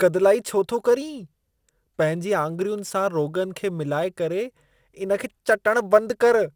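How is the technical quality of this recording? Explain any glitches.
Technical quality is compromised by two faults that run through the whole recording.

Throughout, the speech sounds dull and gurgly, with granular distortion. This is likely MP2 compression, starving its sub-bands of bits, which fits roughly 80 kbps. On a spectrogram, nothing appears above 12.2 kHz and the upper bands flicker.

Sample clock jitter is also present the whole way through. An unstable converter clock mistimes samples by a few microseconds, adding hiss and roughness about 35 dB below the signal. On a spectrogram, this shows as a haze that thickens on loud, bright passages and disappears in pauses.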